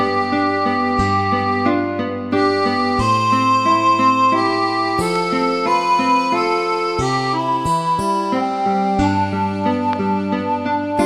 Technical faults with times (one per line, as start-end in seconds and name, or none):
5.16-5.18 loud pop
9.93-9.95 loud pop